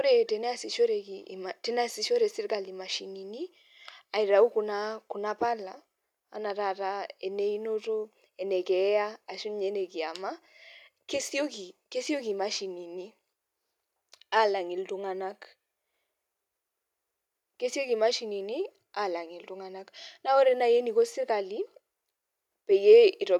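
No technical faults can be heard anywhere in the recording; the signal stays continuous and steady throughout.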